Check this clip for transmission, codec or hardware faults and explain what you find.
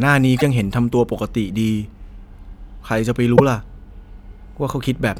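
Two faults of one kind. Damaged data in a compressed stream occurs from 0.35 to 0.42 s and from 3.33 to 3.40 s. Corrupted bytes make the decoder misread frames and lose sync. It hunts for the next frame header. Each event sounds like a brief chirp, squawk, click or short hole.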